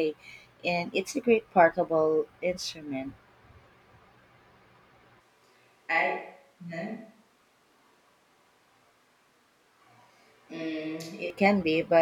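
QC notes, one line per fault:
5.20–11.30 s, switch to a distant microphone: the voice abruptly turns roomy, hollow and thin in the bass, about 5 dB quieter, with room noise roughly 35 dB below it, likely because a far microphone replaced the close one. On the waveform the level steps down at the start and back up at the end, and the spectrogram shows weaker lows and reverberant smearing.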